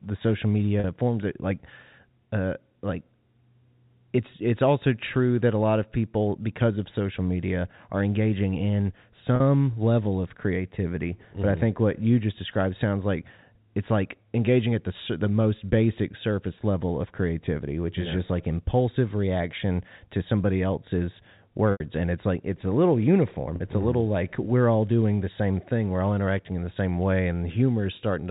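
At 0.80 s (after "the social"), 9.36 s, 21.72 s and 23.56 s you get packet loss with pitch repetition: the receiver repeats the last pitch period to cover each gap. The 40 ms losses, which fit two 20 ms packets, sound like a brief buzzy hold. The 80 ms one at 21.72 s, after "reaction to somebody else's", fades toward silence before the sound returns.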